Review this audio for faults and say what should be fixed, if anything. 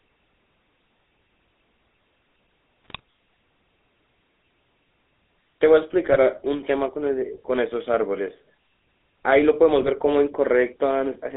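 The whole clip has the buzzy, gravelly texture of the GSM full-rate codec. The speech sits in a 300 Hz to 3.7 kHz band, and the coarse pulse-driven excitation roughens it in a way that fits the 13 kbps full-rate coder. Record or route over a wideband path instead.

There are GSM bit errors at 2.85–3.00 s, 6.04–6.18 s and 9.81–9.89 s. Corrupted filter, pitch and gain values warp the spectrum and jolt the level, so the speech squawks and gargles in those spots. A stronger link or better error protection would stop those frames from getting mangled.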